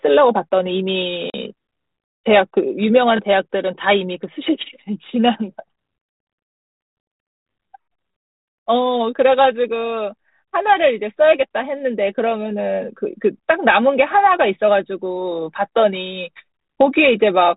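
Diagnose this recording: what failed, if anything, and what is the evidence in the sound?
At 1.30 s the speech drops into a hard-edged silent hole lasting about 40 ms, the loss of a couple of network packets on this G.726 ADPCM call. The gap is filled with silence, and the receiving decoder's adaptive predictor and step size drift from the sender's, so the speech returns slightly distorted and settles over some tens of milliseconds. On a spectrogram this appears as a clean vertical blank band below the 4 kHz telephone ceiling. On the waveform it is a flat gap followed by a brief distorted onset.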